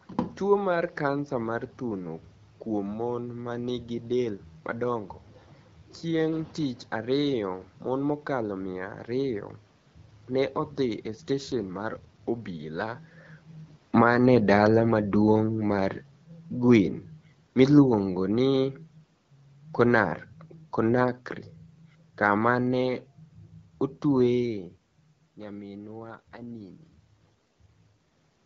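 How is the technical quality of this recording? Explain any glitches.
The recording has two kinds of glitch: brief AMR rate drops and a long automatic gain fall. The speech carries the light, band-limited colour of a wideband phone codec, which fits AMR-WB.

The first AMR rate drop runs from 11.05 to 12.40 s, just after "ne odhi". The second runs from 25.95 to 27.82 s. In both, the voice turns rougher and more synthetic. There is no gap and no loss of bandwidth. This points to the network cutting the codec rate from 12.65 to 8.85 kbit/s. Fewer bits go to describing the voice, so its detail coarsens. Quality returns when the rate climbs back.

The automatic gain falling runs from 13.86 to 24.5 s. The level sinks gradually by about 10 dB. The background room noise sinks with the voice, which marks it as a gain change rather than a talker movement. The gain control judged the input too loud, or its background noise too strong, and eased its gain down step by step. 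The shifts in level near 13 s and 24.5 s sound like the talker moving, not a system fault.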